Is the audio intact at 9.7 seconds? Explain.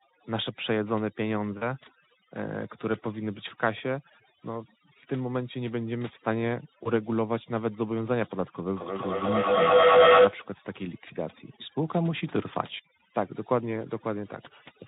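No. At 9.7 s you're right in the middle of a feedback howl running from 8.73 to 10.51 s. A mic-to-speaker loop is gaining level on every pass, with the loop coming round about every 200 ms, so it builds into a tone around 500 Hz, peaking about 11 dB over the speech.

There's also overdone noise removal, which is present throughout. The denoiser is set so hard that it strips out bands near its noise estimate, taking quiet parts of the voice with them. The background drops and breaks up into little twinkling specks.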